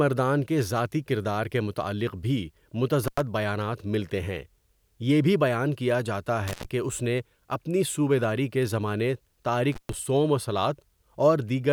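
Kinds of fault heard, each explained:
Intermittent contact: a loose plug or cable briefly opening, so the speech cuts out with crackle at both edges and faint hiss in the gap. It happens three times, at 3.04 s, 6.48 s and 9.72 s, for 93, 114 and 130 ms, the last just before "صوم و".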